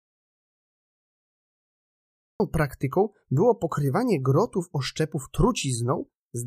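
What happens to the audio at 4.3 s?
Nothing goes wrong at 4.3 s; the speech carries on intact through that moment, with no dropout, click or distortion.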